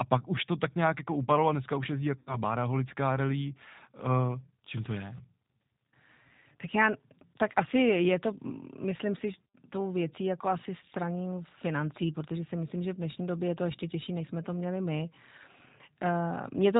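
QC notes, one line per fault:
Throughout, G.729 codec: the speech is rebuilt from a vocal-tract filter, a pitch predictor and a handful of pulses per frame, so everything above 4 kHz is gone and the voice comes across as rough and a bit synthetic, consistent with an 8 kbit/s G.729A stream.
2.19–2.36 s, VoIP packet loss concealed by the speech codec: right after "a dneska už jezdí", about 80 ms of audio goes missing, roughly eight 10 ms frames. The decoder keeps replaying its last pitch and filter at falling gain, so you get a fading buzzy or noisy smear, and the voice stays weak or distorted for tens of milliseconds after packets resume.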